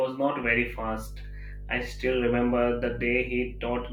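From 0.42 s to the end of the speech, mains hum sits under everything: a steady 50 Hz tone, fairly loud at roughly 10 dB below the signal, from power-line coupling such as a ground loop. A spectrogram shows an unbroken horizontal line at 50 Hz.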